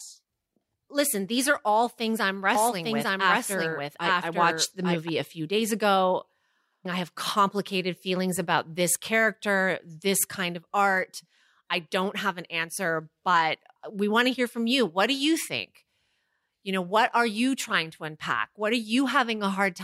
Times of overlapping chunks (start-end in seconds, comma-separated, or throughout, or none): none